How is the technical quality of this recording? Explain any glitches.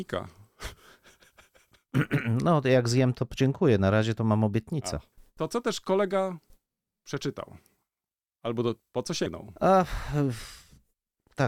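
There is one glitch in this speech recording. At 9.26 s, just after "do po co", there is a brief blip caused by damaged data in a compressed stream. A small stretch of the encoded data was corrupted. The decoder could not read the frame there, so it lost sync and searched for the next valid frame header before resuming. The result is a very short, sharp blip in the speech that lasts only a couple of milliseconds.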